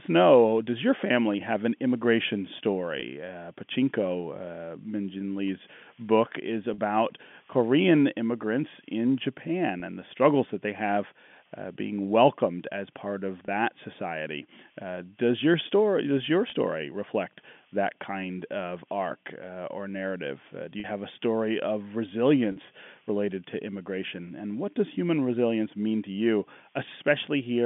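Packet loss with pitch repetition occurs seven times in the speech, at 3.00, 6.74, 9.80 (just before "and the struggles that"), 13.46 (after "welcomed as part of"), 16.50, 20.80 and 22.52 s (between "have a story of" and "related to immigration and"). Each time audio goes missing, the receiver fills the gap by replaying the last pitch period. The 20 ms gaps sound like a brief buzzy hold on the voice. The 40 ms gaps at 6.74, 20.80 and 22.52 s hold longer and begin to fade, which fits two consecutive packets being lost. The G.711 telephone band limits the sound to roughly 200 Hz to 3.5 kHz.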